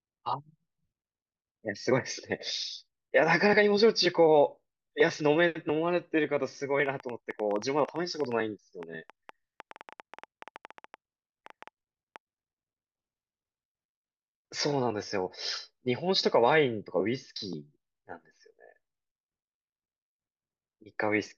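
Speech, with a train of clicks from 6.86 to 12.17 s: around 40 irregularly spaced ticks, about 7.6 per second, roughly as loud as the voice, likely from electrical interference or a faulty connection.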